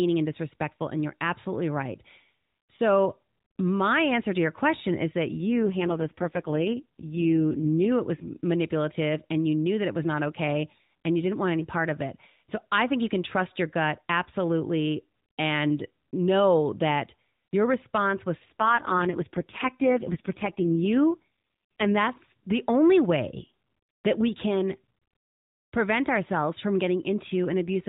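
AMR rate drop from 5.38 to 7.92 s, after "your question is that", and from 18.46 to 21.98 s, before "that's the only way": the speech turns buzzy and synthetic with no gap or band change, which fits the codec falling from 12.2 to 4.75 kbps.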